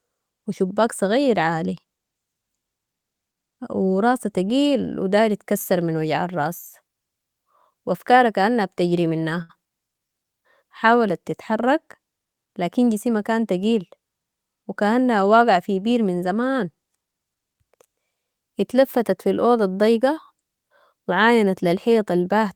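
At 9.42 s, just after "وافكارا كأنها بتجري", there is a short stall from a late packet. It lasts until 9.51 s. A packet did not arrive in time and the jitter buffer ran dry. The receiver held the last sound for 72 ms while it waited. Nothing is lost. Playback resumes from the same point, now 72 ms later. You hear one sound drawn out too long, with a faint buzz or dip.

From 20.41 s to 21.16 s, right after "اتلفتت في الاوضة الضيقة", a jitter buffer speed-up occurs. The buffer was holding more audio than its target. To bring the delay back down, the receiver cut many tiny slices, each a pitch period or so long. In total it removed about 50 ms. The speech runs at 106% speed with its pitch unchanged. This stretch sounds slightly rushed.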